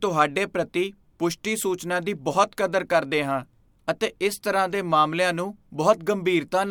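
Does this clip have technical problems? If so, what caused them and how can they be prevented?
No, nothing technical goes wrong anywhere in this speech recording, so there's no cause to track down and nothing that needs preventing.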